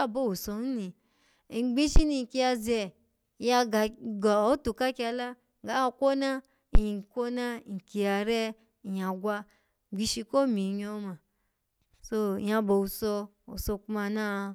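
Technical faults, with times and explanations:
1.96–2.01 s and 6.75–6.81 s, phantom power thump: two deep thumps peaking around -10 dBFS and dying away in about 12–13 ms, the first just before "ni nkiya ze ya", the second right after "ka kyala ga kwona". A supply switching on the live input sends a DC step through the coupling capacitors, which comes out as a low thud.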